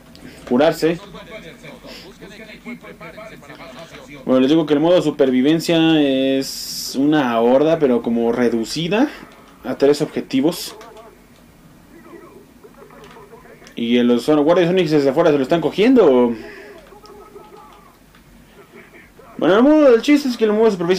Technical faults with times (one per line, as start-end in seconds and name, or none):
0.00-20.99 hard clipping